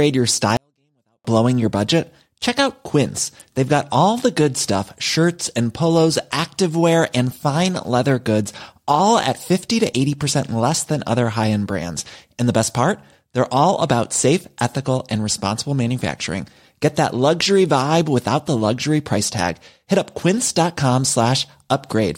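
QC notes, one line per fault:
0.57–1.25 s, 24-bit alignment error (too quiet): the speech stays clean but falls about 48 dB at once, because 24-bit samples sitting in the low bytes of a 32-bit word are read as full 32-bit values. The waveform collapses to a near-flat line and the spectrogram fades almost to blank, recovering just before "blowing your budget".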